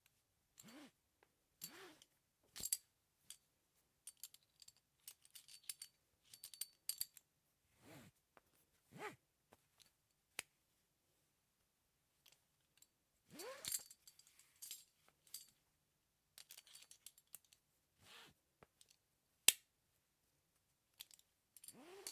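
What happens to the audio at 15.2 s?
Nothing goes wrong at 15.2 s; the sound carries on intact through that moment with no dropout, glitch or distortion.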